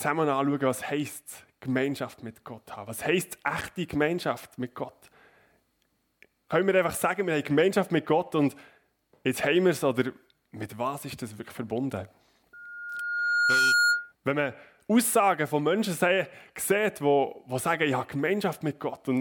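A microphone picked up the loudspeaker it was feeding, pushing loop gain past unity at 1.4 kHz and causing loudspeaker feedback squeal from 12.53 to 14.12 s. A single tone swells over about a second into a piercing squeal, ending a few decibels louder than the sound.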